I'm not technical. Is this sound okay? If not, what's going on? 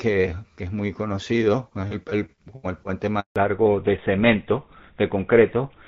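No, not quite. At 3.20 s there's a handover gap: the call jumps between networks and the speech drops out completely for about 160 ms, until 3.36 s. Right after that comes a fallback to narrowband: the call leaves the HD Voice codec for an older one, so everything above 4 kHz disappears and the voice sounds duller and rougher until the end.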